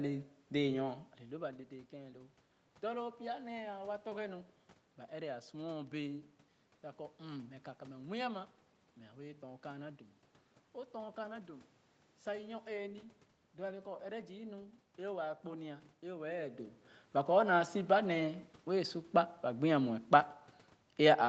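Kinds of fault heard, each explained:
No technical fault can be heard in this speech recording. The call path limits the audio to nothing above 8 kHz, and some background noise from the room sits under the speech throughout.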